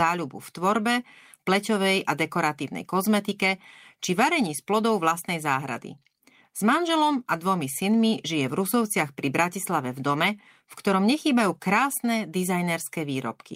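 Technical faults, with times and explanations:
Nothing technical stands out here; the speech comes through without any faults worth flagging.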